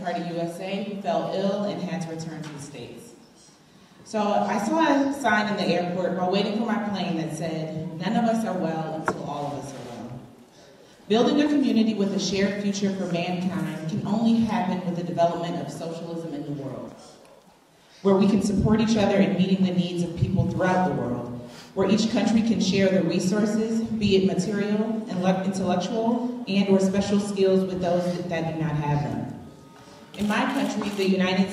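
There are no technical faults to describe at any point in the clip.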